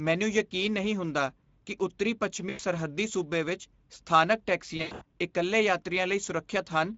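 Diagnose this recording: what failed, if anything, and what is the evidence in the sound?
The codec stage is at fault. The speech passed through Speex at a low-to-middle setting, and the damage fits a rate near 16.8 kbps. With too few bits left for the excitation signal, the whole recording sounds noisy and hoarse, with clear codec artefacts. Any content above 4 kHz is only a shaped hiss, not real detail.

The network also dropped packets, and the Speex decoder's packet loss concealment filled the gaps. At 2.49 s, between "ਨਹੀਂ ਹੁੰਦਾ ਕੀ ਉੱਤਰੀ" and "ਸੂਬੇ ਵਿੱਚ ਸਥਾਨਕ", about 100 ms is missing until 2.61 s. After "ਸੂਬੇ ਵਿੱਚ ਸਥਾਨਕ", from 4.77 to 5.03 s, about 200 ms is lost in bursts across 240 ms, and the longest burst is 100 ms. In each gap the decoder repeats its last pitch and filter with falling gain. That produces a buzzy tone or coloured noise that fades, and the speech stays weak for a short time after packets return.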